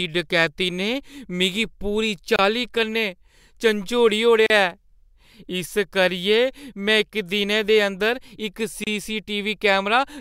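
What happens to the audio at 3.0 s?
Nothing happens at 3.0 s; the speech carries on intact through that moment with no audible fault.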